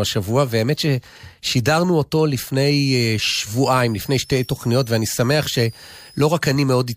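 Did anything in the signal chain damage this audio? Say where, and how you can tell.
Yes. A switching power supply in the analogue stage was running in an audible burst mode or beating with another supply, and its whistle leaked into the speech from 2.86 to 6.27 s: a high tone around 5 kHz, wandering between 4.4 and 6.0 kHz, roughly 25 dB below the speech.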